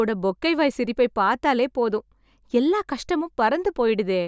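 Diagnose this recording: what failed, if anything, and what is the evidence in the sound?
Nothing in the speech stood out as a fault on listening, so there is no failed stage to point to.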